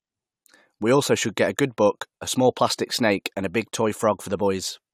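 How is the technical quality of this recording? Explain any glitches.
Nothing here calls for an explanation, since I can't hear a single glitch anywhere in the recording.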